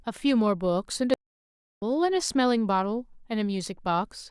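A playback stall at 1.14 s, likely from the player running out of data, silences the speech for about 0.68 s before it resumes at 1.82 s.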